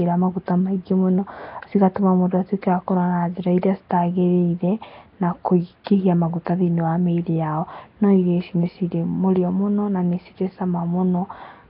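From start to finish the speech carries channel delay comb filtering. One channel of the original pair runs late by roughly a tenth of a millisecond, only a few samples, and when the two are folded to mono the shared content cancels at evenly spaced frequencies, the first notch near 5 kHz. The result is a hollow, phasey colouring whose notches stay fixed in frequency. That fixed pattern separates it from a flanger's sweep. It is also not an echo, because the gap is far too short to hear as a repeat.

Running through the same span is a heavy, rough, hissy halo around the speech, with a smeared, underwater character. This points to Nellymoser compression, likely Flash's Nellymoser Asao at a rate near 22 kbps. The codec spends a fixed two bits per sample on blocks of 256 samples, so weak bands receive nothing and are filled with noise. The hiss clings to the speech itself and follows its level. 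That sets it apart from steady background noise, which would stay put regardless of the signal.

At 5.84 to 5.87 s a sharp attack is preceded by pre-echo lasting about 23 ms. The codec spreads its quantisation noise across the whole block, so noise sized for the loud onset leaks into the quiet moment before it, producing a brief hiss and a softened, smeared attack. The noise arrives before the onset rather than trailing it, and that ordering distinguishes it from reverberation or ringing after the event.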